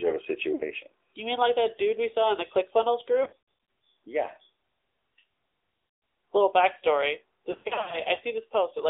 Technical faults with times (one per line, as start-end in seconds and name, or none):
0.00-8.89 AMR narrowband mobile codec
0.54-0.63 lost AMR speech frames
3.24-3.40 lost AMR speech frames
5.88-6.02 lost AMR speech frames
7.52-7.98 lost AMR speech frames